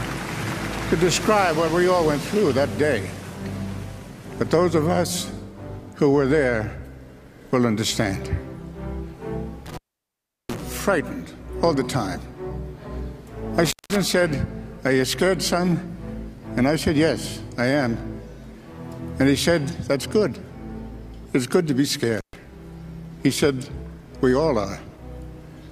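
At 9.66 s there's an intermittent contact: a loose cable or plug briefly opens, so the sound cuts out with crackle where the connection breaks and remakes. That one runs to 10.61 s, with the line open for about 0.72 s. It happens again from 13.65 to 13.96 s, open for 0.19 s, and once more from 22.18 to 22.36 s, open for 0.13 s, each time as a sudden dropout with crackly edges.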